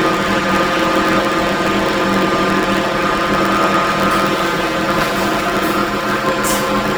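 Throughout, planar audio is read as interleaved: each 11.61 ms block, which fits 512-sample blocks, replays squeezed, leaving a robotic 86.1 Hz buzz with no clear octave shift.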